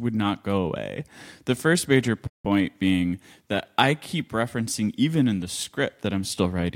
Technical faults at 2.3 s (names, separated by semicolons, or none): playback stall